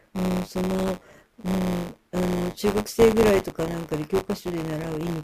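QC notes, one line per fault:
Throughout: buffer tearing, a steady robotic buzz at 100 Hz over the speech, where roughly a few percent of each period replays audio about 20 ms old.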